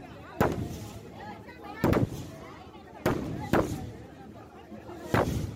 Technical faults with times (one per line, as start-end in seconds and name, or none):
none